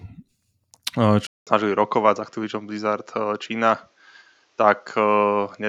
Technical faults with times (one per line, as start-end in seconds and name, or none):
1.27-5.69 input switched to a poorer device